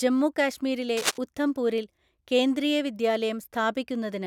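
A speech clip with a burst of cable scratch noise from 0.97 to 1.18 s, between "ജമ്മു കാശ്മീരിലെ" and "ഉഥംപൂരില് കേന്ദ്രീയ". Dense, uneven crackle sits just a few dB below the speech, likely from a worn cable or connector being moved and its contact resistance fluctuating.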